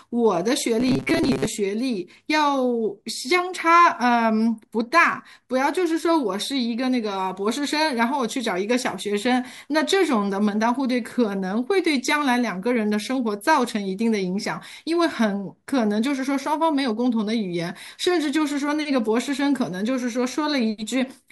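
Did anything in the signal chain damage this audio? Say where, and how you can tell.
Yes. Between 0.80 and 1.45 s the speech carries a robotic sound from repeated short buffers: a rigid 134 Hz buzz, likely driver buffer starvation looping chunks of about 7.5 ms, visible as evenly spaced harmonic stripes on a spectrogram.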